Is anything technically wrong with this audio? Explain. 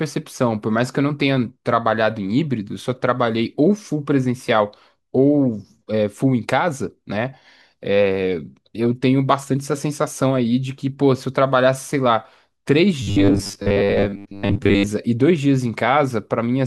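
Yes. Robotic sound from repeated short buffers, 13.02 to 14.91 s: likely starved input, so a 10 ms snippet repeats over most of the speech, forcing a rigid, metallic 100 Hz buzz.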